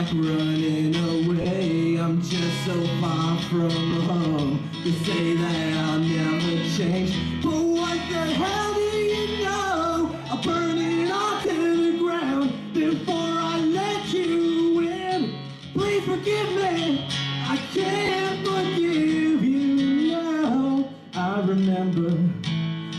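Lost LE Audio frames at 1.42–1.46, 3.90–3.92, 11.46–11.49 and 18.06–18.09 s: the LC3 decoder refills the gaps with sign-scrambled copies of the last spectrum, so tonal lines become brief noisy smears on a spectrogram.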